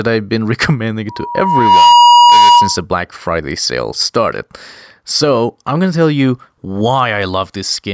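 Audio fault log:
throughout, gain pumping: the level is pulled down on each louder stretch of speech, swinging about 5 dB, likely from input gain set far too high with a fast limiter. The waveform looks squashed.
1.09–2.83 s, loudspeaker feedback squeal: a single 958 Hz tone builds over roughly 0.7 s to about 10 dB above the speech, because the microphone picks up its own loudspeaker and the loop gain at that frequency exceeds one. The spectrogram shows one bright horizontal line.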